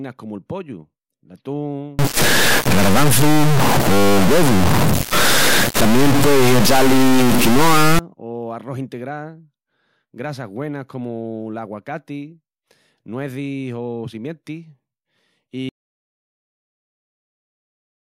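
Speech, with two faults. From 1.99 to 7.99 s there is a stuck bit. The sound picks up grainy noise or buzzy distortion, and quiet moments fill with noise. It stops just before "o arrós". A data bit held at a fixed value is the likely cause, probably from a faulty line or converter. At 15.69 s there is an audio dropout to silence. The sound cuts off mid-flow and stays silent to the end. No room tone remains. The input was likely lost while the recorder kept writing silence.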